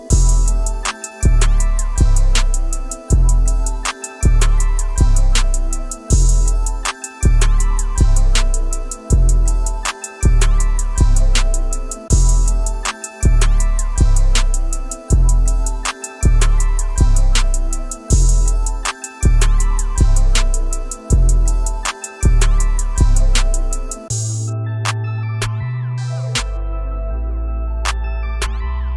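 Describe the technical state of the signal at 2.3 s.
At 2.3 s the signal is intact, with no audible fault at that moment.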